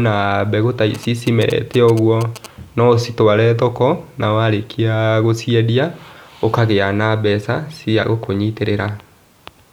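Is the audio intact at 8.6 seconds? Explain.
Yes, at 8.6 seconds the speech is intact, with no dropout, click, distortion or other fault to be heard at that moment.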